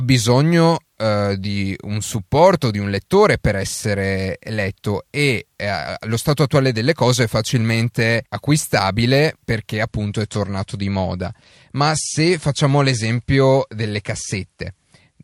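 Right after "è facilmente acquistabile perché", at 9.88 s, the speech suddenly goes duller with no gap: an adaptive stream dropping to a lower bitrate, which sounds like a step from around 128 kbit/s MP3 down to roughly 55. Everything above 11.3 kHz disappears, and smearing artefacts are present through the end at 15.24 s.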